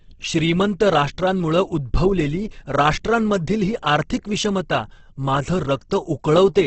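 Speech with heavy Opus compression throughout: it sounds rough and grainy, and a spectrogram shows a flat ceiling near 8.1 kHz with noisy, smeared bands, likely from encoding at around 12 kbps.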